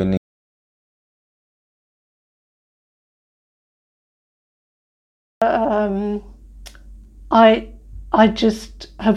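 A short speech recording that cuts out almost immediately: at 0.17 s the sound stops dead and the track stays in silence, with no room tone or hiss at all, until it resumes abruptly at 5.42 s, so about 5.2 s of speech is simply missing. This is an audio dropout to silence, likely caused by the input being lost through a disconnected device, failed link or accidental mute while the recorder kept writing silence.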